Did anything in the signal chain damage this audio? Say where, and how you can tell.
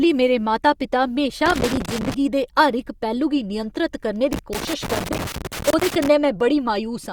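Yes: irregular scratchy crackle from 1.46 to 2.14 s and 4.33 to 6.08 s is loose connector crackle in the analogue wiring, a worn contact intermittently breaking the signal.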